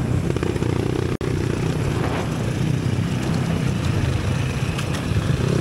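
At 1.16 s a gap at a join of encoded pieces cuts in: a gap of about 55 ms, ending at 1.21 s, where separately encoded sections were butted together with their encoder delay and end padding left in. The sound then resumes where it stopped. The waveform shows a flat notch with softened edges; the spectrogram, a vertical blank stripe with blurred edges.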